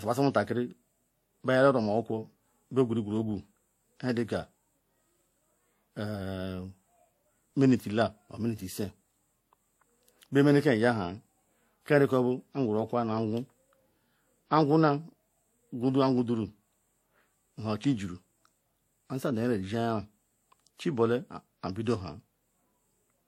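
From the very start and right through the speech, there's a layered quality with nothing above 16.5 kHz, and two different flavours of compression grit sitting on top of each other. That's most likely transcoding between lossy codecs: it sounds like a Vorbis encode around 65 kbit/s that was then re-encoded to WMA at about 64 kbit/s. The second encoder wasted bits preserving the first one's artefacts while adding its own, so both are audible together.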